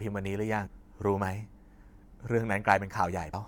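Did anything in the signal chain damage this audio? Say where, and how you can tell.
Yes. Two brief glitches break into the speech, one at 0.65–0.67 s and another at 3.32–3.35 s, each lasting just over 20 ms. The fault lies in the codec stage, with damaged data in the compressed stream. Corrupted bytes in the encoded file reach the decoder, which misreads those frames and loses sync. It then hunts for the next valid frame header, and what it outputs meanwhile is heard as those short glitches.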